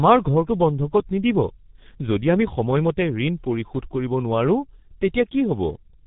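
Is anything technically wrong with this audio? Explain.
Yes. The whole clip goes through a G.723.1 codec, heavily damaged: nothing above 3.8 kHz, long frames, a slow voice model, so speech sounds muffled and hoarse with smeared consonants, consistent with roughly 6 kbit/s.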